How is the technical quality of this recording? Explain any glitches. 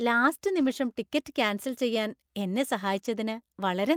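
One glitch stands out in the speech: a lost packet rebuilt from error correction, from 0.59 to 0.69 s. Several packets went missing, but each following packet carried a low-bitrate spare copy of the one before, and the decoder played those copies instead of leaving a gap. About 60 ms of audio was rebuilt, which fits three 20 ms packets. There is no dropout, but that stretch sounds rougher and noisier than the surrounding speech.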